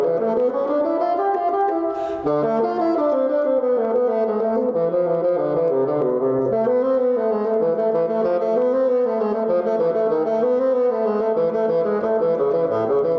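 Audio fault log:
Throughout, gain pumping: microphone gain likely set far too high, so a fast limiter clamps each loud sound, ducking the gain about 10 dB, which then swells back in the gaps.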